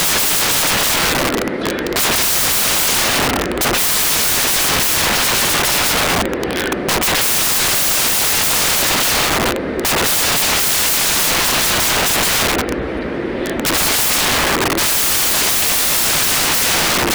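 From the first moment to the end, the audio is buried under loud, harsh broadband noise, the sign of samples built from the wrong bytes. The bytes of each sample are assembled out of order or misaligned, so the rapidly changing low bits land in the most significant positions. Unlike ordinary hiss added over a clean signal, this noise replaces the signal itself.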